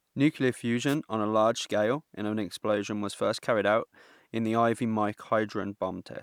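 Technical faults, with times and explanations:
0.88–0.95 s, wireless microphone noise hit: a 75 ms swish of static just before "on a large scale", as reflected radio paths cancelled and receiver noise rose. A spectrogram shows a brief broadband vertical smear; the waveform shows a short noisy patch.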